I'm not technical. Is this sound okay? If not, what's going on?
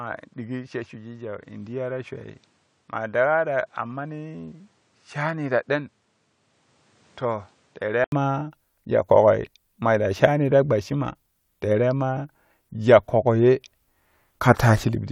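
No. Until 8.1 seconds the speech sounds duller and quieter, likely because the input switched to a poorer device. A brief gap follows before clearer sound returns.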